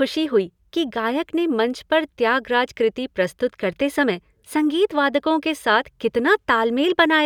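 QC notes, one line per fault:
No audible faults found anywhere in the speech.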